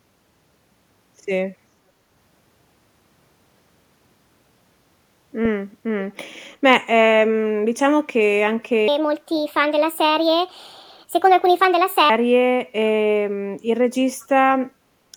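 From 14.2 to 14.26 s there is an echo leak: the echo canceller on the far end likely failed to remove loudspeaker sound its microphone picked up, sending it back. This appears as a brief, very faint copy of the speech, delayed 520 ms and roughly 35 dB below it.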